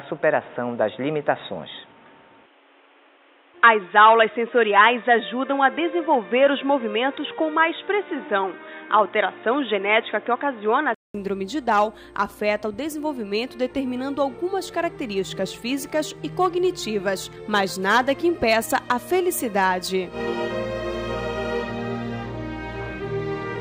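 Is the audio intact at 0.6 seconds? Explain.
No. From 0.0 to 11.15 s the sound is dull and boxy, with nothing above 3.8 kHz. The likely cause is an input switched to a poorer device, a narrower-band microphone or headset profile with its own tone and hiss. A spectrogram shows a hard ceiling at 3.8 kHz over a steady noise floor roughly 35 dB down. At 11.15 s the waveform drops flat for 200 ms, then the full band returns with a level shift of about 5 dB.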